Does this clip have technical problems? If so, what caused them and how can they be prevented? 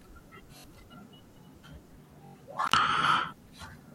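Yes. The speech stutters at 0.58–0.64 s and 2.26–2.35 s, where a 21 ms piece repeats three and four times with hard joins. This is a repeated buffer: audio arrived late, so the device replayed its last block, which fits a 1024-sample buffer. Larger buffers or lower system load would prevent it.

At 2.67–2.73 s the speech cuts out for about 58 ms with crackle at each edge, an intermittent contact where a loose cable or plug briefly opened the line. Secure or replace that connector to prevent it.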